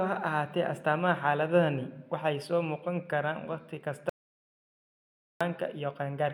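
The input feed was likely lost for a moment, leaving the recorder writing silence: an audio dropout to silence. Right after "muuqan karaan wakhti kasta", at 4.09 s, the speech cuts off into total silence with no room tone, returning mid-flow at 5.41 s, about 1.31 s gone.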